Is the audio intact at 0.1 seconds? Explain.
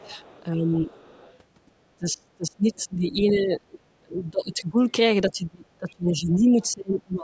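No. From 0.0 to 0.09 s the speech is pulled down by around 10 dB, likely speech suppressed in double talk, with the echo canceller ducking everything rather than removing a separate sound. From 0.03 to 0.43 s a faint second voice, roughly 25 dB below the speech, sits underneath it, likely the other side's voice leaking through from the loudspeaker, heard as an added voice rather than a drop in level.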